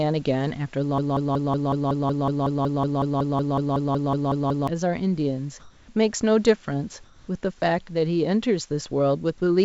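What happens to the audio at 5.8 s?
From 5.60 to 5.88 s the room background gives way to a flat, featureless hiss for about 0.28 s, shifting in level by about 3 dB. This is comfort noise in place of the background, likely from discontinuous transmission, where the receiver synthesises noise during a pause.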